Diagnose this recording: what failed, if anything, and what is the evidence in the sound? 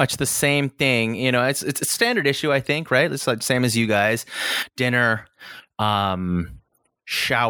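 Nothing failed in this recording; there is no evidence in the sound of any fault at any stage.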